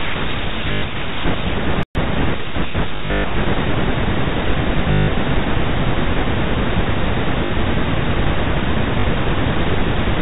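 Short robotic stutters with a buzzy edge break into the speech from 0.72 to 0.82 s, 2.96 to 3.24 s, 4.92 to 5.08 s, 7.46 to 7.50 s and 9.00 to 9.04 s. This is packet loss with the last packet repeated: the receiver replayed the previous chunk until fresh data arrived, and the repeats buzz at roughly 50 Hz, which fits 20 ms packets. The longest stretch, at 2.96 to 3.24 s, is broken up over 280 ms, with runs of up to 120 ms.

From 1.83 to 1.95 s the sound drops to silence mid-flow for about 120 ms and then resumes. This is a playback stall, most likely because the player ran short of data or its output thread was briefly blocked. Throughout, the audio carries the narrow, telephone-band character of G.711 coding.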